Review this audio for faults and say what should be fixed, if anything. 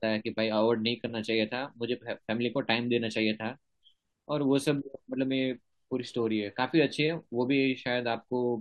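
No faults found in the speech; nothing needs fixing.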